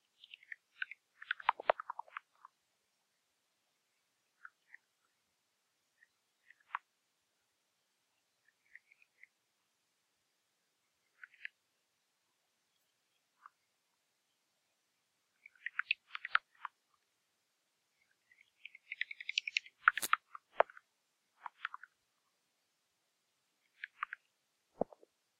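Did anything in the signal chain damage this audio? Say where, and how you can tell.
No, nothing in these sounds stood out on listening as damage from any stage of the signal chain.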